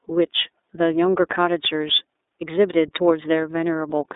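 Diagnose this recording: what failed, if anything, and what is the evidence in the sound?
The codec stage is the problem: this speech went through iLBC for its whole length. Nothing gets past about 3.8 kHz, the band sits roughly 300 Hz to 3.7 kHz, and each 30 ms frame is coded independently, giving a plainly rough, synthetic edge consistent with the 13.33 kbps mode.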